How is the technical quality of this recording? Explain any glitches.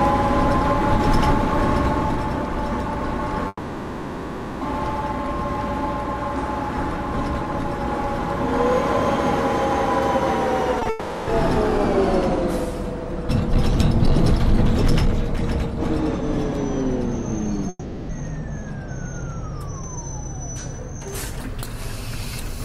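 The recording has clear network glitches: three long gaps and a pair of brief smears, all leaving holes in the audio.

Long network dropout, at 3.47 to 4.63 s, 10.89 to 11.29 s and 17.69 to 18.11 s: the sound trails off into a fading buzz or hiss, then returns with that stretch missing. The likely cause is that no audio arrived for about 1.1 s, 0.4 s and 0.4 s, so the receiver stretched the last sound to fill each gap.

Short concealed packet loss, at 10.79 and 10.83 s, just before the second dropout: two brief wobbles occur back to back. Two 20 ms chunks never reached the decoder in time, so it patched each gap by continuing the previous sound and then blending back into the real audio.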